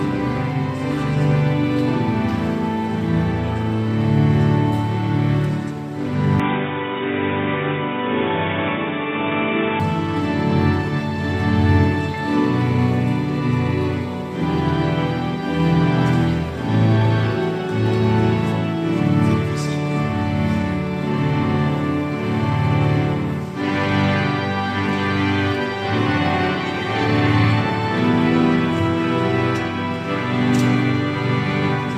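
From 6.40 to 9.80 s the audio turns dull and band-limited, nothing above 3.8 kHz, with a faint new noise floor, likely an input switched to a poorer device.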